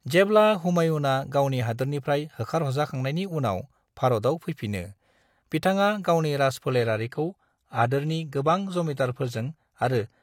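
At 6.71 s the speech abruptly turns duller and synthetic, with a hard ceiling near 14.9 kHz, and it stays that way to the end at 10.22 s, with no gap at the switch. This is an adaptive stream at a lower bitrate: the player dropped to a leaner encoding when throughput fell. The sound points to a shift from roughly 96 kbit/s AAC to a 24 kbit/s HE-AAC stream, with the treble rebuilt rather than coded.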